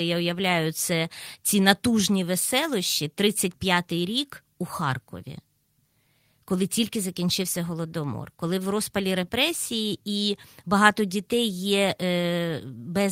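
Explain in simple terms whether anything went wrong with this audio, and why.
Nothing went wrong here, as far as listening goes; the speech just carries on steadily with no dropouts, glitches or odd sounds to point to.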